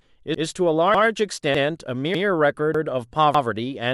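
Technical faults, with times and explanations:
0.35–0.45, 0.95–1.05, 1.55–1.65, 2.15–2.25, 2.75–2.85 and 3.35–3.45 s, overlapping chunks: each 0.5 s chunk starts 100 ms before the previous one ended, so that stretch of speech plays twice, causing a regular stutter every 0.6 s.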